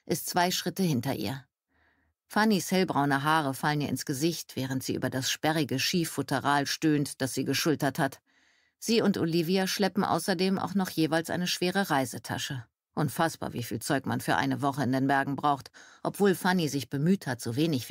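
Underrun with held sample, at 7.59 s and again at 13.58 s. Each time the output buffer ran dry and the converter froze on its last value, so the waveform sits flat for about 1.45 ms, a length that fits a 64-sample block. The sound drops out almost silently, and roughly a millisecond and a half of live audio is lost meanwhile.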